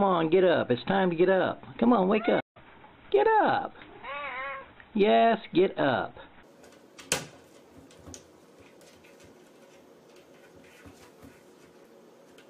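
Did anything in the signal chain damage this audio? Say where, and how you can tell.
Yes. At 2.40 s the sound cuts out mid-flow and the output goes silent until about 2.57 s, a gap of roughly 150 ms that opens and closes abruptly. This is a playback stall, at the playback stage. The likely cause is the player's buffer running dry, or its audio thread being held up, so no samples reached the output for that stretch and silence filled the gap until it recovered.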